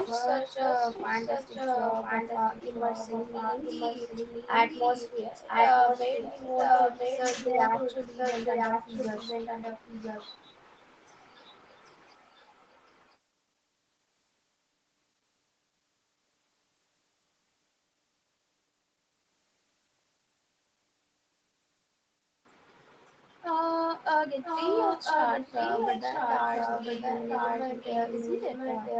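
From 0.0 to 13.17 s, and again from 24.33 s to the end, a delayed copy of the speech runs about 1 s behind the original at roughly the same loudness: an echo leak, likely from a loudspeaker-side echo canceller letting its microphone pickup back into the call. On a spectrogram, the harmonic pattern of each phrase reappears one second later, overlapping the next. The waveform shows near-equal bursts doubled, all within a band that tops out at 8 kHz.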